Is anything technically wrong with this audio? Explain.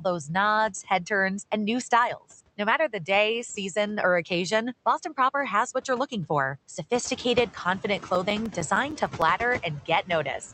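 Yes. Two faults are audible in this speech clip.

Noise suppressor artifacts run throughout. The suppressor cuts bands it judges to be steady noise, by about 15 dB, frame by frame. The background drops away between words and creeps back under them. This pumping gets more noticeable once the room noise rises at about 7 s.

CD scratch ticks occur from 7.85 to 9.37 s, just after "you're looking for sophisticated". A disc blemish destroys more data than error correction can rebuild, once per revolution. The player patches or mutes those samples. The result is eleven short ticks, about seven a second, each lasting only a few milliseconds.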